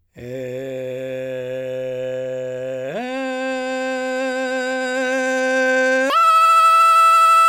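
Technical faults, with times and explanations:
6.1–7.48 s, section at the wrong speed: the final stretch of the music suddenly runs at about 1.9 times its proper speed, so tempo and pitch jump together, with everything rising by roughly ten semitones and sounding hurried and thin. The likely cause is this section being played against the wrong clock. On a spectrogram, harmonics and partials shift abruptly upward and spread wider apart at 6.1 s. The waveform's events crowd closer together, with shorter gaps between attacks.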